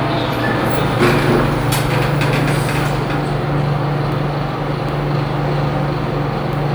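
No technical faults can be heard in the audio, so there is nothing to describe in time order.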